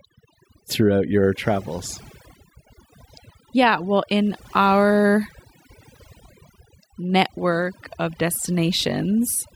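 A speech recording suffering from overdone noise removal from start to finish. A noise reducer pushed too hard has pulled down every frequency band it judged close to the noise floor, so the background drops away and breaks up into twinkling specks, and the softer parts of the voice are stripped away with it. On a spectrogram the gaps show as dark, empty regions scattered with isolated bright dots, and the voice's harmonics look ragged and patchy rather than smooth.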